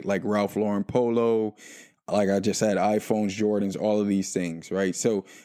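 No technical faults can be heard anywhere in the recording.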